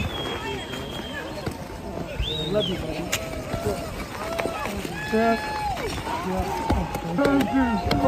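Nothing stood out as a technical problem on listening to the audio.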